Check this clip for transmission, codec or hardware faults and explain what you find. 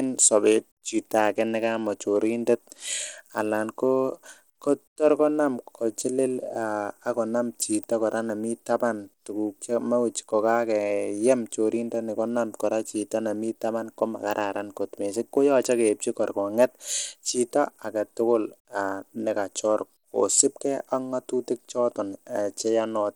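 One fault runs through the whole speech clip. Bluetooth SBC compression, likely, starved the upper sub-bands of bits, so the treble drops out and flickers while plainly audible gritty noise and aliasing ride on the voice, which fits a low bitrate around 96 kbps.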